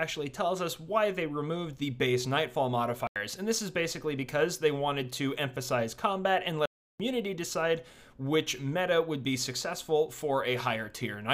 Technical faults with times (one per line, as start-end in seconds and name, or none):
3.07-3.16 block of digital silence
6.66-7.00 block of digital silence